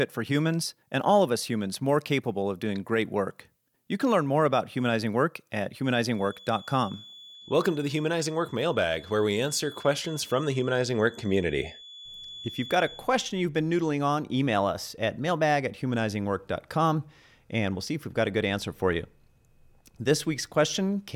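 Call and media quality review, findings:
Thin steady whistle at 3.4 kHz behind speech, 6.06 to 13.12 s, swelling and fading slowly in level, about 20 dB below signal. Feedback whistle, likely speaker-to-mic acoustic loop held at the edge of feedback, sustaining one tone without runaway.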